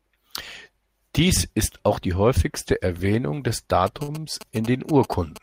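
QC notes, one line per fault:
3.87 s to 5.42 s, GSM signalling bursts: a nearby 2G phone starts signalling here and keeps it up to the very end, sending short groups of radio bursts that the audio circuitry rectifies. You get that galloping dit-dit-dit of short buzzes pulsing at about 217 Hz, the GSM frame rate, sitting roughly 15 dB under the speech, so it rides alongside it rather than swamping it.
4.03 s to 4.11 s and 4.20 s to 4.26 s, short stall from a late packet: twice in quick succession a packet turned up late, the jitter buffer ran dry, and the receiver held the last bit of sound until it arrived, then carried on from the same spot. Nothing's lost, but the speech hangs for about 48 ms on the first and 25 ms on the second, which comes across as a brief smeared hold with a slight buzz or dip, tangled up with the phone bursts around it.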